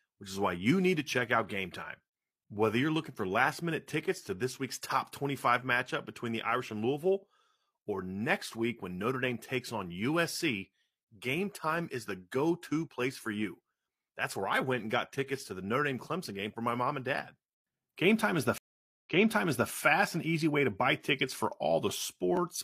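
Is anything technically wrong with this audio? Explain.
Yes, there is a stream reconnect from 18.58 to 19.70 s. The connection dropped, leaving 0.47 s of silence, and the restarted decoder resumed 0.65 s earlier, repeating speech. On the waveform this shows as a flat gap followed by duplicated material.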